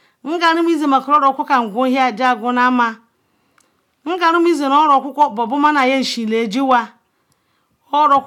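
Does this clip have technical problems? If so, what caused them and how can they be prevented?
No, there are no technical problems.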